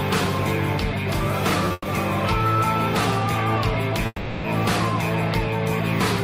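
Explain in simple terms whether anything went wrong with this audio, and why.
Two problems can be heard, both pauses added to the audio rather than pieces taken out.

At 1.68 to 1.72 s there is a short stall from a late packet: one chunk of sound arrived late, so the last sound was held for about 20 ms until it showed up. Nothing is lost, and it is only a slightly stretched moment, with no fade-out or silence, which is what separates it from a freeze.

Then come two call audio freezes, at 1.72 to 1.87 s and 4.06 to 4.46 s. The sound trails off into a fading buzz or hiss, goes briefly silent, and then picks up exactly where it stopped. They add pauses of about 130 ms and 380 ms without skipping anything. The likely cause is a batch of sound packets held up in transit, leaving the receiver nothing to play for a moment.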